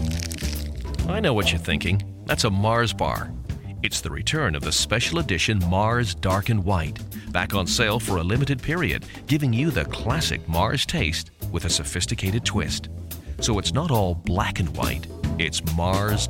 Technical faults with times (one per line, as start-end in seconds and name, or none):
none